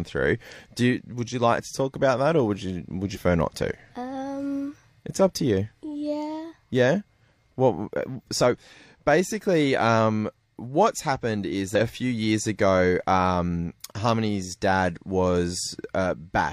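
At 3.12 to 3.19 s and again at 11.75 to 11.81 s, this speech is broken by a brief chirp or squawk, the mark of damaged data in a compressed stream. Corrupt bytes make the decoder misread frames and lose sync until it finds a valid header. On a spectrogram each event shows as a short smear of broadband or oddly tonal energy breaking the harmonic pattern; the waveform shows a jagged, discontinuous burst.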